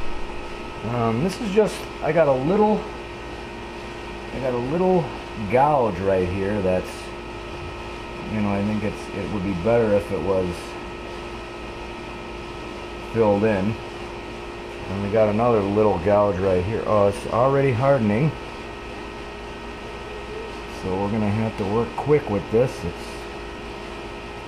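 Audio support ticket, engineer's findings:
No faults found on listening; nothing to attribute to any component.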